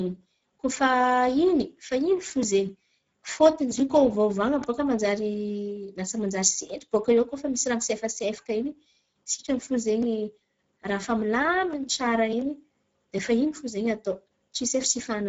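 From the start to the end of the speech you can hear Speex codec damage: a hoarse, noisy grain on the voice, as CELP runs short of bits for the excitation. It sounds like a bitrate near 10 kbps, and nothing comes through above 7.7 kHz.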